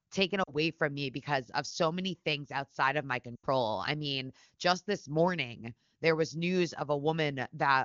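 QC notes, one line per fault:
0.43–0.53 s and 3.36–3.47 s, lost AMR speech frames: the decoder reuses the last good pitch and vocal tract settings at falling gain, so the sound drops to near silence within two frames. Gaps of about 40 ms and 80 ms, which fits two and four 20 ms frames, appear as smeared, fading spectrogram bands and shrinking waveform envelopes.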